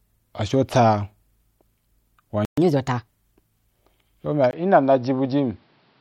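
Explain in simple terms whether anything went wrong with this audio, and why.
At 2.45 s the speech cuts out for about 0.12 s, a playback stall, most likely the player briefly running out of data before resuming.

From 2.58 to 3.07 s comes catch-up at higher speed: the player runs at 1.25 times normal speed, so the voice sounds rushed and noticeably higher-pitched, then settles.

At 4.51 s, right after "u bya", there is a tiny gap and the input switched to a poorer device, likely a different microphone. From there to the end the sound turns duller, with a faint new background noise, at roughly the same loudness.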